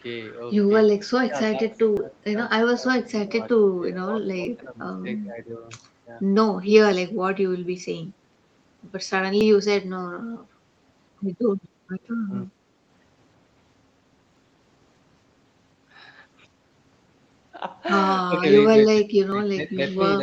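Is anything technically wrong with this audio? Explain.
Yes. Speech suppressed in double talk occurs at 1.27–2.40, 2.76–4.88, 5.46–5.65, 12.27–12.50, 18.27–18.56 and 18.88 s to the end. The level dips by roughly 15 dB, only slightly at 5.5 s and about 25 dB at the end, likely because an echo canceller mistook overlapping far-end sound for echo.

Audio missing between chunks occurs at 1.97, 4.45, 6.93, 9.41, 11.89, 14.37, 16.84 and 19.32 s. Each is a brief skip of roughly 20 ms, spaced about 2.5 s apart, likely lost at chunk boundaries.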